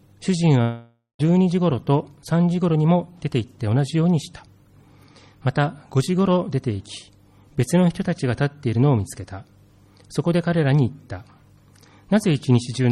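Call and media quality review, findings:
Long network dropout, 0.61 to 1.21 s. Likely loss of incoming packets on the receive path. Concealment stretches the last sound into a fading buzz or hiss for about 0.58 s, then 140 ms of silence. Audio resumes with 580 ms of content gone.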